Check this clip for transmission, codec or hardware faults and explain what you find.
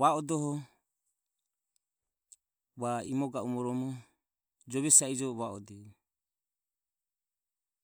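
Nothing here points to a transmission, codec or hardware problem; the speech comes across steady and intact the whole way, with nothing to flag.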